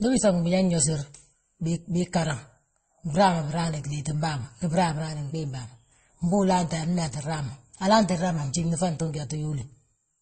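Throughout, the speech is dull, with nothing above 8.3 kHz and two kinds of smeared, warbling artefacts layered together. This is likely transcoding between lossy codecs, fitting low-rate Opus followed by MP3.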